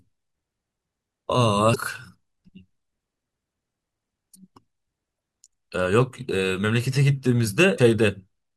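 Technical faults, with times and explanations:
1.71–1.76 s, 5.16–5.19 s and 7.75–7.79 s: damaged data in a compressed stream. Each event is a brief glitch of roughly 25 to 45 ms in the speech, where the decoder misreads corrupted frames, loses sync and searches for the next valid frame header.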